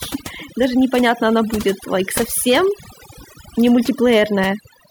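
Overdone noise removal runs through the whole speech clip: an over-aggressive noise reducer has pulled individual frequency bands down whenever they neared its noise estimate, leaving the background at near-silence with twinkling specks. A spectrogram shows isolated bright dots scattered across dark background gaps.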